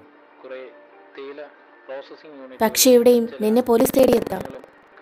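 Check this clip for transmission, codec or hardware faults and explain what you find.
One hardware fault is present: buffer tearing from 3.76 s to the end. The writer and reader of the audio buffer have drifted, so each period splices in a tenth of audio about a tenth of a second old, producing a 21.5 Hz rattling buzz that fits a 2048-sample buffer. Waveforms show regular hard discontinuities, and spectrograms show vertical striping at that rate.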